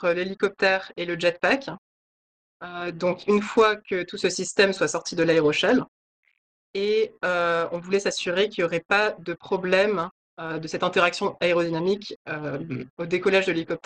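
Nothing in this audio stood out as a technical problem on listening.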